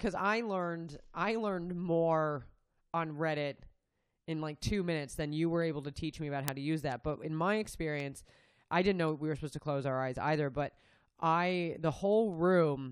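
From 0.20 s to 12.77 s you get word clock ticks, about fifty of them, roughly every fifth of a second. The receiver isn't locked to the sender's clock, and with around 100 ppm of drift it drops or repeats one sample at each slip.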